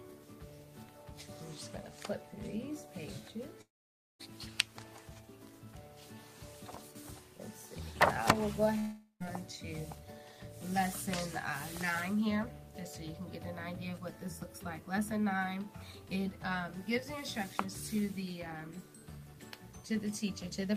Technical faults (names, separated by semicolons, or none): long network dropout